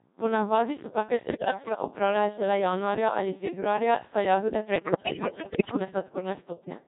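From the first syllable the speech has the robotic, buzzy quality of the Codec 2 vocoder, heavily damaged, at a rate that fits its 1.6 kbit/s mode. No waveform survives. The decoder rebuilds each frame from sine waves using only pitch, voicing, level and a coarse spectral envelope, so the voice sounds synthetic and smeared. Unlike ordinary low-bitrate codec artefacts, there is no watery swirl or pre-echo. Even clean stretches sound machine-made, with a steady buzz where breathiness and detail should be.

From 1.24 to 1.82 s, after "navadi se take" and before "opravljajo šele januarja ali", bit errors on digital voice radio break the synthesis. About one bit in ten is flipped, and because each bit sets the pitch, level or spectral shape of a whole frame, the voice lurches into bleeps, warbles and sudden jumps in pitch and tone colour. A worse burst runs from 4.76 to 5.79 s after "ali februarja saj jagode", with roughly one bit in five wrong, and turns into robotic gibberish. 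These are not dropouts or clicks. The sound keeps going but becomes wrong.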